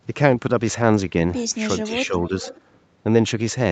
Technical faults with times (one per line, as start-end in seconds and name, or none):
1.83-2.32 speech suppressed in double talk
2.11-2.60 echo leak